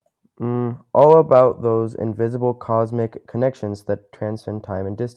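No technical faults occur anywhere in the speech.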